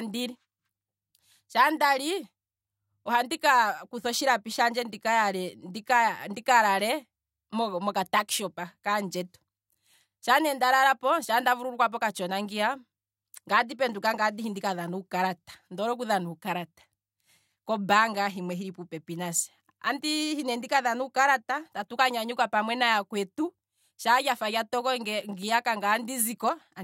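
A recording of speech, with no technical fault anywhere in it. Nothing here calls for a time, a cause or a fix.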